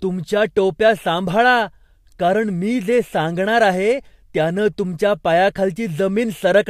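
Nothing in this recording of speech stands out as a technical fault, so there's nothing to flag here.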